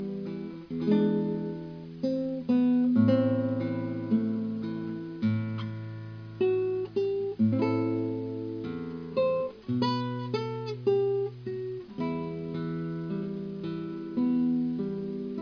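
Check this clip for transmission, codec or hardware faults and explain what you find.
Nothing in the clip points to a fault in how the audio was carried, encoded or played back. There is nothing here that needs further explanation.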